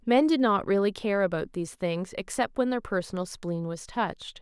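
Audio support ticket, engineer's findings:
Listened through the speech clip and found nothing worth flagging; no fault to chase here.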